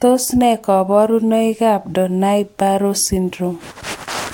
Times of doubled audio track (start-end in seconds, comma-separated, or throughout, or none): none